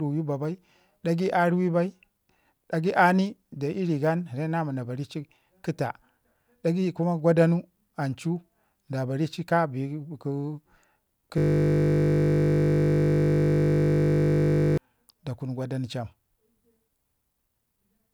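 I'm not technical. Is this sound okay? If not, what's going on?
No. From 11.38 s to 14.78 s the speech stops and is replaced by a steady buzz. This is a system hang loop: the computer or its audio driver froze, but the sound hardware kept replaying the last 20 ms of audio it held, over and over, well over a hundred times. Because that piece is so short, the repeats blur into a 50 Hz drone rather than a distinct stutter.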